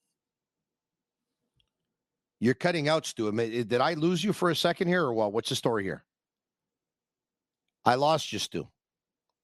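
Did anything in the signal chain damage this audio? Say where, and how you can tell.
No, nothing in the signal chain stood out as damaging this speech on listening.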